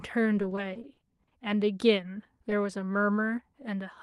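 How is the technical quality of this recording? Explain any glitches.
The recording has one clear glitch: repeated packet loss, producing a robotic sound, from 0.35 to 1.33 s. Across that second, audio arrives with about ten holes, the longest 40 ms, and roughly a quarter of the stretch (24%) is concealed by stretching the preceding sound forward, with only about 150 ms of it roughly rebuilt. The speech turns choppy, with fragments missing. On a spectrogram, harmonics freeze into flat, smeared bands at each hole; the waveform shows repeated, oddly periodic segments. Throughout, content fades out near 12 kHz, which points to an Opus call link at around 40 kbps.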